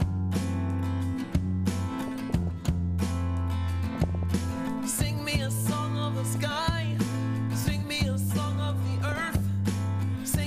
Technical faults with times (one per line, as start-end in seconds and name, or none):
2.08-2.47 DAB burbling
3.95-4.35 DAB burbling
6.26-6.36 DAB burbling
8.98-9.39 DAB burbling